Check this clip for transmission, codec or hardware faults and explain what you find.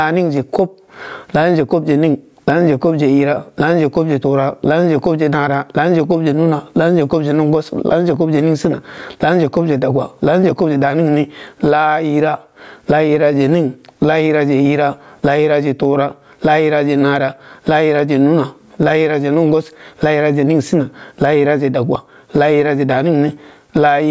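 One fault runs through the whole clip: gain pumping. The gain swings by around 20 dB. The likely cause is input gain set far too high, with a fast limiter pulling the level down on every peak. Loud and quiet passages sit unnaturally close together, so the speech sounds squashed. The call's microphone processing is audible in the missing lowest bass and nothing above 8 kHz.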